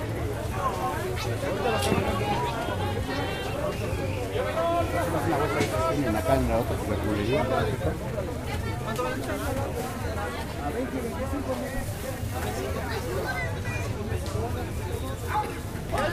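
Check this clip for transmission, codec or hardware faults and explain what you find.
One hardware fault is present: an unreliable data bit between 11.90 s and 13.38 s. For about 1.5 seconds, one line of the digital sample word behaves marginally, so that bit reads wrong in a random fraction of samples. Each wrong bit adds a spike of identical size, about -32 dBFS, independent of the program level. The result is a continuous crackle or fizz laid over the sound, persisting through quiet moments rather than following the signal.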